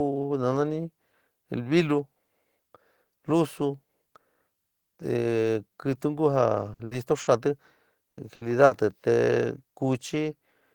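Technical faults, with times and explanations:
6.73–6.82 s, 6.85–6.94 s, 7.21–7.30 s, 8.11–8.20 s, 8.35–8.44 s and 8.65–8.74 s: burst of packet loss. Each is a short stretch of speech where consecutive packets never arrived in time. The receiver extends the last received sound for about 60 ms, fading it as it goes, so voiced parts turn into a brief held buzz and unvoiced parts into a dying hiss. Speech then resumes about 60 ms further along, and the skipped material is lost.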